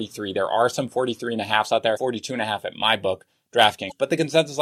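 Brief glitches break into this speech clip at 1.93 to 1.98 s, between "and a halfs out" and "and a half at", and again at 3.88 to 3.92 s, each about 40 ms long. They come from damaged data in a compressed stream: corrupted frames there confuse the decoder until it regains sync.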